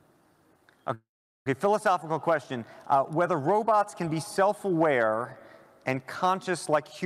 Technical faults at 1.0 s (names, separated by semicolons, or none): call audio freeze